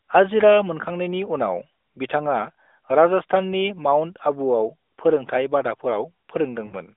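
From 6.66 to 6.74 s come lost AMR speech frames. The decoder stretches the last good frame over about 60 ms, which fits three dropped 20 ms frames, with falling gain, so the speech smears and fades. The waveform tapers, and the spectrogram shows frozen harmonics dimming below 3.6 kHz.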